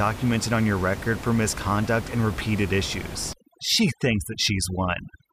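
From 3.33 s, right after "misconduct and repeated issues", overdone noise removal sets in and runs to the end of the clip. The room noise, about 12 dB below the speech, is pushed far down by a reduction set too hard, and frequency bands near its noise estimate are cut out together with quiet parts of the speech. The background drops and breaks up into twinkling specks. A spectrogram shows scattered isolated dots and holes, with the speech bands looking patchy.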